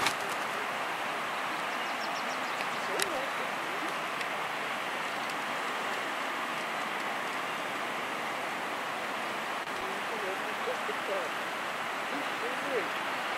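Loose connector crackle appears from 3.01 to 3.18 s and again from 9.64 to 9.83 s. A worn contact rapidly breaks and remakes the signal, producing irregular scratchy bursts. The waveform shows chopped gaps, and the spectrogram shows scattered broadband vertical streaks.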